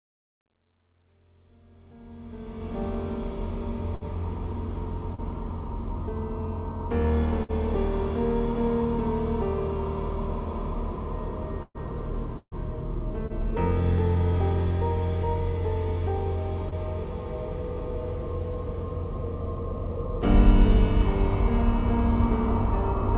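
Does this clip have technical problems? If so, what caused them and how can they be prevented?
Yes. Four kinds of fault can be heard.

Truncation distortion on the fade: The clip fades in from the start to 2.83 s. Until about 2.01 s the quiet sound is gritty. It smooths out by 2.83 s. The fade stage kept too few bits and added no dither. At these low levels the waveform collapses into a few coarse square steps, which fits about 11-bit resolution. To prevent this, apply the fade at higher resolution and dither before reducing the bit depth.

Burst of packet loss: This happens twice, from 3.95 to 4.04 s and from 7.43 to 7.52 s. Each time, the last sound is held and turned down for about 56 to 57 ms. The sound then jumps ahead, and about 60 ms of audio is missing. A short run of packets was lost or arrived too late. The receiver stretched the last sound to cover the hole. To prevent this, use a steadier network, a larger jitter buffer, or forward error correction.

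Short concealed packet loss: Brief smears appear at 5.15 s and 16.69 s. Each is about 30 ms long. At each point a few hundredths of a second did not reach the decoder in time. The receiver carried the previous sound forward and blended it back into the real audio. Short sounds at those moments can be lost. To prevent this, reduce network jitter and loss, or add redundancy so a lost packet can be rebuilt.

Repeated packet loss (robotic sound): From 11.63 to 13.45 s the sound turns choppy. There are five gaps in this stretch. The longest is about 140 ms. Together they remove about 300 ms of audio, and concealment fills roughly a sixth of the span. Each patch is followed quickly by the next loss. To prevent this, fix the congested link and enable loss protection.

The audio also has nothing above 4 kHz. This fits a narrowband call codec such as G.711.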